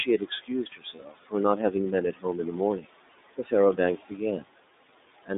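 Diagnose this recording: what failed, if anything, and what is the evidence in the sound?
The call processing stage has noise suppressor artifacts all the way through. The room noise sitting roughly 16 dB under the speech gets pulled down by about 17 dB whenever there's a pause, then swells back up underneath the speech. The suppressor is gating the background frame by frame rather than leaving a constant floor.

The codec is iLBC, and the damage is plainly audible. The band is squeezed to roughly 250 Hz to 3.7 kHz, so there's no air on top and not much bottom. The speech stays clear but has a rough, synthetic grain. That grain and the frame behaviour fit the 30 ms, 13.33 kbps mode. Each frame's excitation is coded on its own, so detail gets traded for robustness.

The same suppressor also cuts into the speech. From 0.05 to 1.34 s it keeps mistaking speech for noise, with dips as deep as about 18 dB spread over well over half a second in total, so consonants and word endings sound swallowed. 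There are shorter bites at 2.13 to 2.25 s (about 14 dB) and 2.81 to 2.95 s (about 19 dB).

That's the network stage, with lost iLBC frames in two spots. Around 0.95 to 1.0 s and again at 4.86 to 4.89 s, about 30 ms each, the sound smears into a short held, faintly buzzy vowel. That's the decoder's concealment repeating the last pitch cycle with some noise mixed in. Each gap fits a single dropped frame, and because iLBC frames don't depend on each other, the audio snaps back right after.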